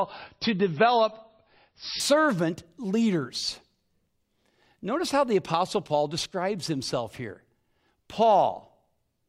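From the start to 2.0 s, the player is an adaptive stream starting at a low bitrate before switching up. Until then nothing reaches above 5.8 kHz and codec artefacts are stronger, consistent with roughly 24 kbit/s MP3. At 2.0 s the speech turns suddenly fuller and cleaner, with no gap.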